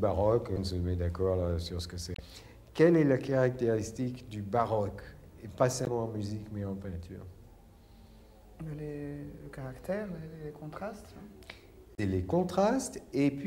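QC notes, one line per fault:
0.54 to 0.58 s: damaged data in a compressed stream. A short glitch of about 44 ms. Corrupt bytes made the decoder misread a frame and lose sync.
2.13 to 2.20 s: damaged data in a compressed stream. A longer glitch, about 67 ms. The decoder lost sync and hunted for the next valid frame header.
5.84 to 5.88 s: damaged data in a compressed stream. A 44 ms glitch, from the same bad-frame decoding.
11.95 to 11.99 s: damaged data in a compressed stream. A 42 ms glitch, from the same cause.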